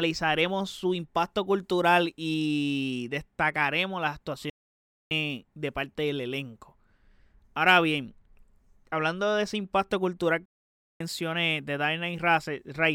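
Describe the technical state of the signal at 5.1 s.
At 5.1 s the speech is at the very end of a playback stall running from 4.50 to 5.11 s: about 0.61 s of dead silence, likely from the player's buffer running dry, before sound resumes. Waveform and spectrogram show a flat, empty gap with abrupt edges.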